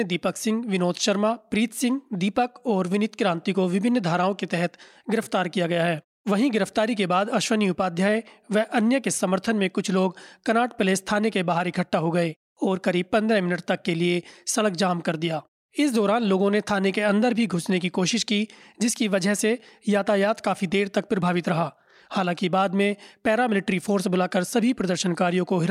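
No technical faults are audible.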